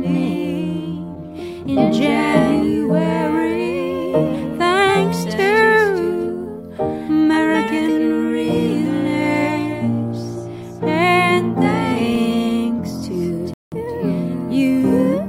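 At 13.54 s the sound cuts off mid-flow for about 184 ms, a playback stall, likely from the player running short of data or having its output thread blocked. On the waveform this is a flat gap of digital silence; the spectrogram shows a clean vertical blank band across all frequencies.

From 13.72 s to 13.90 s a time-compressed catch-up follows: the player drains its backlog at 2× speed by splicing out short segments and cross-fading the joins. The sound is hurried but keeps its pitch, and the spectrogram shows squeezed, slightly smeared frames without any upward pitch shift.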